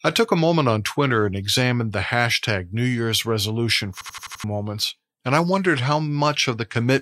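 At 4.01 s the speech locks into a system hang loop until 4.44 s, just before "moments and I wondered". The machine or its driver stalled while the sound hardware kept replaying the same ring buffer, so one slice of about 85 ms repeats five times at 11.7 Hz. That length fits a 4096-sample buffer. Every repeat is identical, which sets it apart from a packet-loss concealment stutter. The result is a machine-gun rattle, and close to half a second of audio is lost.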